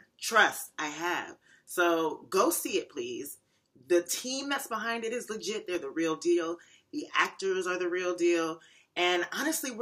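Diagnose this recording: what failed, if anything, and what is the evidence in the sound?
CD scratch ticks appear from 5.75 to 6.60 s, four brief ticks, each well under a millisecond. This is a playback-stage fault. A surface blemish, passed once per disc rotation, corrupts more data than error correction recovers, so the player interpolates or mutes those samples.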